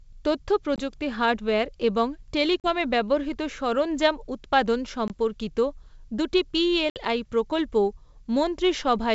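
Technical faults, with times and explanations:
0.76–0.81 s, 2.60–2.71 s, 5.08–5.11 s and 6.90–6.98 s, packet loss on an ADPCM call: hard-edged silent gaps of 20, 40, 20 and 60 ms, consistent with roughly one to three lost packets each. The speech then resumes with brief, slight distortion because the G.722 decoder's adaptive predictor and step size lost step with the sender and needed tens of milliseconds to realign.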